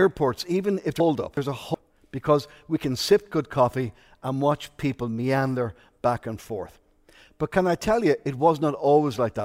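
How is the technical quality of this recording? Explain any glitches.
The recording has one glitch, a short passage of frames out of order. It runs from about 1.0 to 1.75 s, between "even if" and "because we can sip". Two neighbouring blocks of audio, each about 372 ms long, were decoded in swapped order. The second half plays first. This fits runs of four frames. The passage sounds garbled and fluttery. No time is lost overall.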